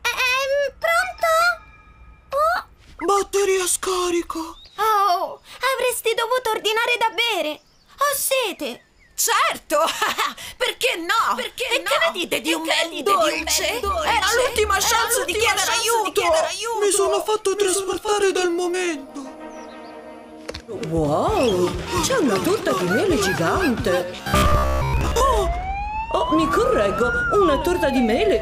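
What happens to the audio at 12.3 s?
At 12.3 s a second full-band copy of the sound trails the original by roughly 0.7 s, a few decibels quieter, dry and without decay. This doubled audio track runs abruptly from 11.13 s to 18.45 s, likely from a slower capture path mixing the audio in twice.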